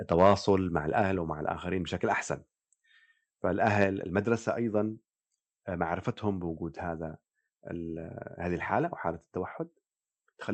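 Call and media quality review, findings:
Harsh, crackling edge on loudest peaks at 0.11–0.51 s (about 6 dB over, a couple percent of samples flattened) and 3.66–3.84 s (about 2 dB over). Likely microphone overload: peak tops clipped at converter full scale.

Sudden drop in level, voice and background together, about 4 dB at 1.02 s and about 3 dB at 3.84 s, each after distorted peaks. Likely microphone volume stepped down by call software reacting to clipping.

Call path audible as Opus-style coding texture, top end ending near 8 kHz.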